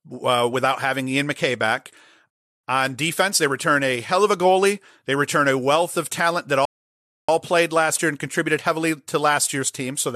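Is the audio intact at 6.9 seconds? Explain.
No. At 6.9 seconds the player is in a rebuffering stall: it ran out of downloaded audio at 6.65 s and waited for more data until 7.29 s. The speech cuts to silence, then picks up exactly where it stopped, adding 632 ms without losing anything.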